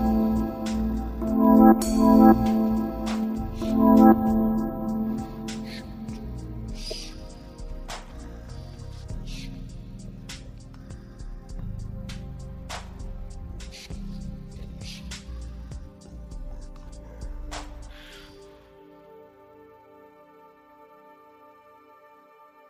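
Everyday sound, with one corrupt frame decoded at 6.90 to 6.93 s. A brief chirp, squeak, blip or burst of noise cuts in, peaking around -20 dBFS. Flipped bits sent energy to wrong frequencies. Its 30 ms length points to a single damaged compressed frame played anyway.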